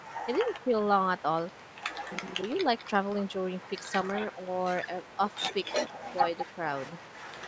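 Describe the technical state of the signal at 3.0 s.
At 3.0 s the speech carries an echo leak, running from 2.56 to 3.1 s. A faint copy of the talker returns about 200 ms late, well below the direct sound. It is most likely a loudspeaker echo that the far side's echo canceller failed to fully remove.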